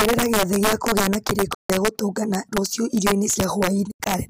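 Speech with integer overflow throughout. The loudest peaks are driven about 5 dB past the integer limit and wrap to the opposite sign instead of being held at full scale. A small fraction of samples flip across the whole range, giving violent cracks far sharper than the flattened buzz of clipping. AAC frame loss with muting leaves two soft-edged holes, at 1.55–1.70 s (about 150 ms) and 3.91–4.07 s. The second is broken up over about 190 ms, its longest gap around 100 ms. The decoder zeroes the missing spectrum, so overlapping windows fade the sound out and back in.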